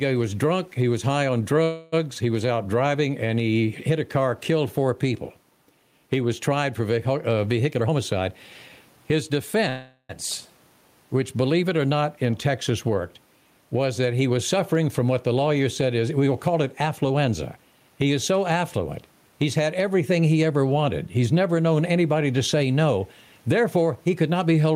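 A speech recording that pumps throughout, with the level swinging by roughly 10 dB under louder syllables, likely gain pumping from excessive mic gain feeding a fast limiter; the waveform shows a flattened envelope, and the room noise sits about 45 dB below the speech. At 1.63–1.94 s and 9.69–10.11 s there is a call audio freeze: the last sound smears into a fading buzz or hiss for about 0.29 s and 0.40 s, the second ending in a brief 10 ms silence. This is likely jitter-buffer underrun, and on a spectrogram it appears as horizontal streaks that fade before the speech resumes with nothing lost. Jitter buffer speed-up hurries the speech at unchanged pitch at 7.66–8.29 s (126%, roughly 150 ms cut), 8.90–9.56 s (106%), 13.75–15.00 s (107%) and 17.03–17.58 s (109%), with pitch periods visibly spliced out and the harmonics staying level.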